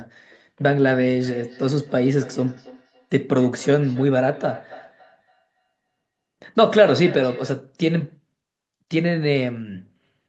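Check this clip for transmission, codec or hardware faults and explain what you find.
There's one fault here, a feedback echo between two devices, running from 1.23 s to 7.66 s. A second device in the room replays the call and its mic sends it back, so the speech returns roughly every third of a second, thinner and ringier each pass, peaking at about 19 dB below the speech. The top end stops at 8 kHz, which is just the call codec's bandwidth.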